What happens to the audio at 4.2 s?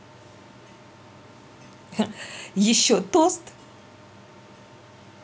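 Nothing goes wrong at 4.2 s; the speech carries on intact through that moment.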